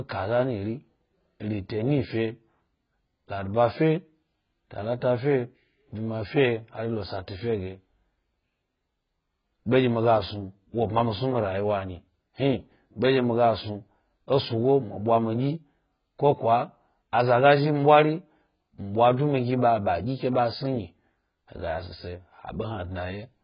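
Speech that sounds dull and heavily degraded throughout, with nothing above about 5.1 kHz. This is likely AAC compression. The encoder has lowered its cut-off and coarsely quantised the remaining frequency lines against a hearing model, which fits AAC-LC at a very low bitrate of around 12 kbps.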